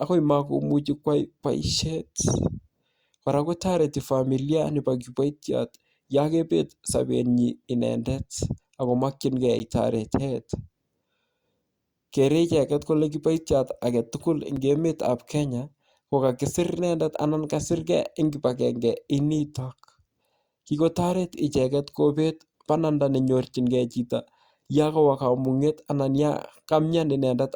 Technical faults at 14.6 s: block of digital silence

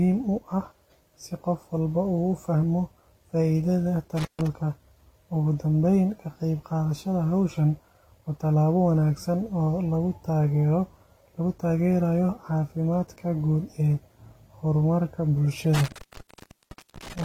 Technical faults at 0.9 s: transcoding between lossy codecs

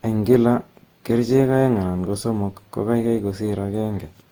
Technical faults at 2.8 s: generation loss

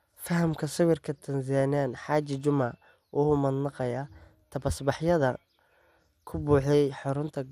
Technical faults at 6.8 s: MP2 compression

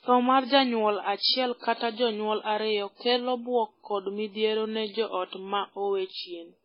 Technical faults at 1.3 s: transcoding between lossy codecs

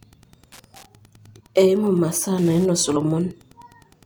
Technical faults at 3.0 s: Wi-Fi interference; compressed frames skipped

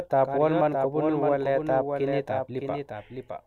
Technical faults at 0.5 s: doubled audio track

